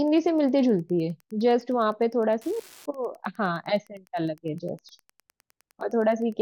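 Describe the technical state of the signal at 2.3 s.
At 2.3 s a faint, steady ticking sits under the speech, about ten clicks a second and some 35 dB below it. This is Wi-Fi interference, present through the whole clip rather than only at this point. A nearby Wi-Fi radio sends a beacon every 102.4 ms. The audio circuitry picks up each burst of radio energy and rectifies it, so the beacons turn into audible pulses at that regular rate.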